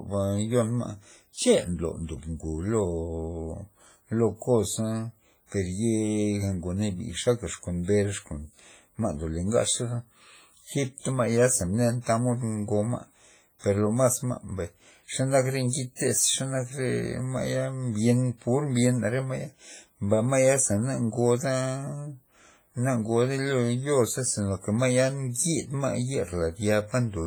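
Across the whole speech clip the sound rings and smears, with a washy hiss that swells and fades along with the signal, and the damage is heavy throughout. This is the character of WMA compression, most likely an early WMA encoder working at a low bitrate, around 24 kbps by the sound of it. Its long transform blocks spread quantisation noise over tens of milliseconds, and quieter detail is thrown away entirely. Two attacks are also preceded by a brief hiss, one from 15.69 to 15.73 s (about 38 ms) and one from 15.96 to 15.99 s (about 37 ms), and both onsets sound softened and smeared rather than crisp. This is pre-echo. Each sharp onset lands late in a coding block, so the noise budget set for the loud moment is spread across the whole block and fills the quiet stretch just before the attack.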